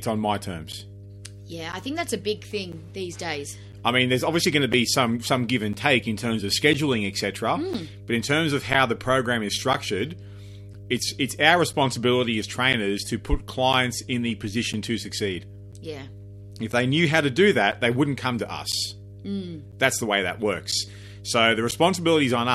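Mains hum runs through the whole recording: a steady 50 Hz tone with a few low harmonics, roughly 20 dB below the speech, from power-line coupling such as a ground loop. A spectrogram shows unbroken horizontal lines at 50 Hz and its multiples.

Periodic USB or driver dropouts begin at 0.72 s and repeat every 1.0 s until 21.72 s, around twenty in all. Each time, something stalls the audio path and roughly 10 ms is replaced by silence, heard as regular ticks. The waveform shows evenly spaced flat gaps, and the spectrogram shows thin vertical breaks.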